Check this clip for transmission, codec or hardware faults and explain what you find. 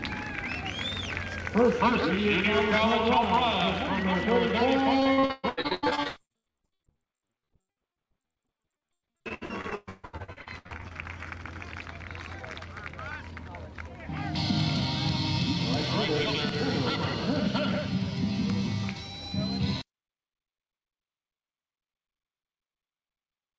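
One transmission fault stands out. From 5.00 to 10.92 s there is repeated packet loss (robotic sound). Packets kept going missing or arriving late, leaving dozens of holes up to 142 ms long. The receiver patched each one by stretching the preceding sound, so nearly half of that stretch is filler, heard as choppy, robotic audio with pieces missing. The band stops at 8 kHz, as a G.722 call link would give.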